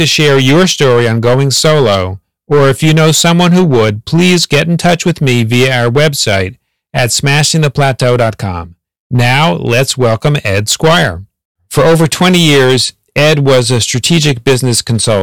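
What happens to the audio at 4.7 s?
Hard clipping is present at 4.7 s, as it is throughout the speech. The signal is driven about 12 dB past what the stage can pass, so roughly a tenth of the samples are cut flat, and the flattened peaks add a harsh, buzzing fuzz to every louder syllable.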